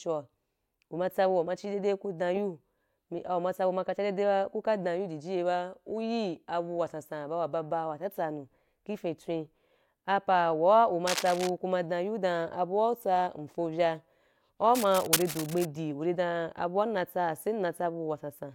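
A worn cable, connector or control being moved is the likely cause of cable scratch noise in this speech clip, from 11.07 to 11.50 s just before "ku ma" and from 14.75 to 15.68 s. Each time, dense, ragged scratching rustles over the speech, only a few decibels below it.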